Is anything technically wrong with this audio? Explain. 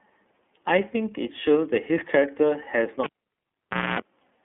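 Yes, two faults. Throughout, the speech has passed through the iLBC codec. It codes each 30 ms frame's excitation independently, and the sound points to its 13.33 kbps mode. The path keeps only about 200 Hz to 3.4 kHz. The speech is thin and telephone-like, and the independent frame coding leaves a plainly audible rough, synthetic texture.

From 3.04 to 4.0 s, the cable was pulled and plugged in again while live. Breaking the contact gives a pop. The signal then drops to near silence for roughly 0.9 s. While only the plug tip touched, the unshielded contact picked up about 0.25 s of 60 Hz mains buzz. A second pop follows as full contact returns at 4.0 s.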